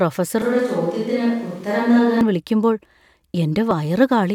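From 0.42 s to 2.21 s the speech turns roomy and hollow, thinner in the bass and about 5 dB quieter, with room noise roughly 30 dB below it. The abrupt change in and out points to a likely switch to a distant microphone after the close one dropped out. At 3.71 s there is a tiny skip, caused by an overlap between stream segments. The player trimmed overlapping time stamps, removing about 14 milliseconds of audio that was never duplicated, so the waveform jumps.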